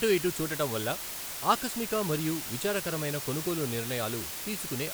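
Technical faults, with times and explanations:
Throughout: low bit depth with dither. The speech sits on just 5 bits, so the dithered rounding error becomes a steady hiss nearly as loud as the speech itself.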